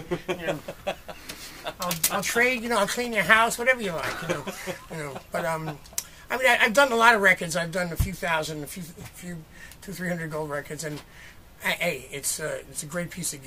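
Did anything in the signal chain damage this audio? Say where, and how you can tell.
Yes. GSM signalling bursts got into the analogue wiring from 2.10 to 4.33 s: galloping ticks and 217 Hz buzz, well below the signal, from a nearby phone's radio being rectified.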